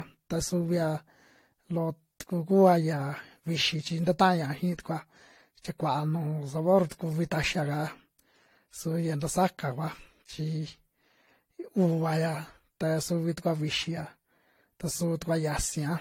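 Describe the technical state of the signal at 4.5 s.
At 4.5 s the signal shows two problems. It falls inside a run of periodic USB or driver dropouts from 3.49 s to 5.48 s, just after "loo tuku kua yia". Every 0.5 s a tiny slice of audio, around a tenth of a millisecond, goes missing and the stream jumps straight past the gap instead of filling it. Each skip breaks the waveform and produces a tick over the speech. The strict spacing points to a background task repeatedly stalling the audio path.

Generation loss is also present at this point, as it is across the whole clip. The speech sounds swirly and hollow, consonant onsets are smeared, and nothing is present above 16.6 kHz. This is likely the result of several passes, roughly four, through a lossy codec, which fits AAC-LC at around 64 kbit/s. Each re-encode quantises on a shifted frame grid, so noise and spectral gaps build up beyond what one encode at that bitrate would leave.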